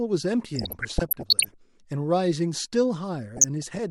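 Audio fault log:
0.56–1.54 s: DAB burbling, a bubbling, squelchy chirping laid over the speech, as narrow bands of the sound jump up and down in level from one short frame to the next. Weak reception likely let bit errors, under 1 percent of bits, slip past error correction and corrupt the MP2 samples and scale factors.
3.34–3.79 s: DAB burbling again, shorter and milder, matching a lower error rate of a fraction of a percent.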